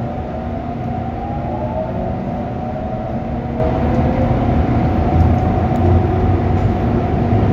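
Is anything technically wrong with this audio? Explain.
Yes. At 3.6 s there is a sudden gain jump: the level rises by about 6 dB in a single step and stays raised to the end of the clip. The likely cause is a digital gain setting applied from one sample to the next with no ramp. Unlike a fade or compressor pumping, the change is instantaneous and never recovers, and the background noise steps up by the same amount as the sound itself.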